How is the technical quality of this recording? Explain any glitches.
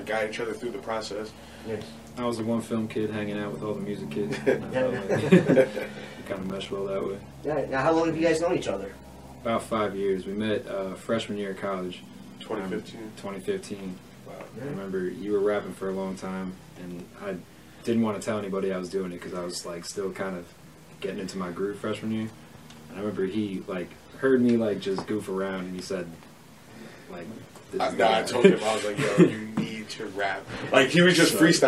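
One glitch stands out. From 6.28 to 6.71 s there is processor overload crackle. The processor repeatedly missed short buffer deadlines of about 5 ms, leaving around fifteen hard-edged silent gaps. You hear them as gritty tearing, which shows on the waveform as notches and on the spectrogram as thin vertical broadband streaks.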